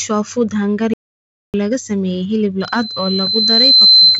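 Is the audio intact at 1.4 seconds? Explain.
No. An audio dropout to silence runs from 0.94 to 1.54 s, so 1.4 s falls inside it. The input was likely lost while recording continued, writing silence: the sound cuts off abruptly, leaving about 0.6 s of dead silence without room tone.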